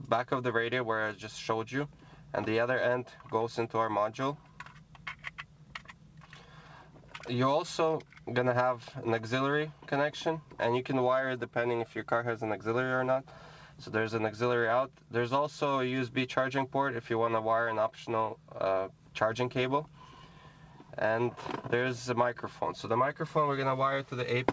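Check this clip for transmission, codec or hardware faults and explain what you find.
Nothing here stands out as a transmission, codec or hardware problem, and the only thing worth noting is the ordinary character of the call path, where the top end stops at about 8 kHz, which fits a wideband codec like G.722 at 64 kbps.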